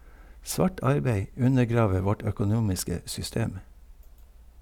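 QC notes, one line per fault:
No audible technical faults: the speech signal is clean throughout.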